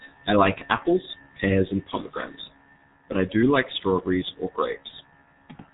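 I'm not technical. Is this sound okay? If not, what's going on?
No. The whole clip has been squeezed through the G.723.1 codec, an old internet-phone format. Heavy compression removes everything above about 3.8 kHz and smears quick sounds, so the speech is muffled and hoarse, with blurry consonants throughout.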